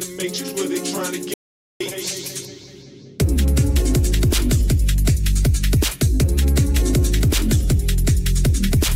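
At 1.34 s the sound cuts off abruptly and drops to dead silence. It returns just as suddenly at 1.80 s. This is an audio dropout to silence lasting about 0.47 s. The gap holds no room tone or hiss at all, only silence. That points to a loss of input rather than a quiet passage. The likely cause is a brief disconnection, a failed link or a stray mute while recording carried on. Whatever happened in that stretch is lost.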